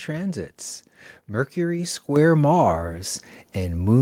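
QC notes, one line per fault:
2.16 s, microphone volume stepped up: the speech and the room noise behind it both jump by about 6 dB at once. That's the call software deciding the mic was too quiet and bumping the device input level in a single step rather than easing it up.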